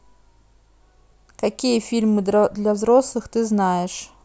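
No technical faults can be heard anywhere in the speech recording.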